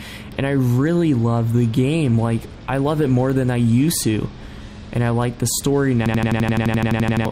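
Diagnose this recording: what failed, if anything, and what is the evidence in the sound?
A system hang loop at the driver or buffer stage: from 6.06 to 7.25 s one 85 ms slice repeats exactly, a stutter at 11.7 Hz that fits a 4096-sample ring buffer cycling while the host froze. The waveform shows identical blocks, the spectrogram evenly spaced vertical stripes, and about a second of audio is lost.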